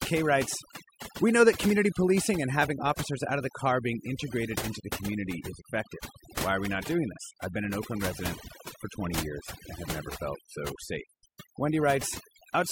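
Throughout, the speech sits over near-silent, twinkling gaps: overdone noise removal, where over-strong noise reduction cut bands near its noise estimate, taking quiet speech detail too.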